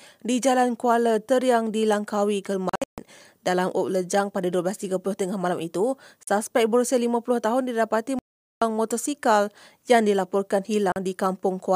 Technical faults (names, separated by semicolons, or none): Bluetooth dropout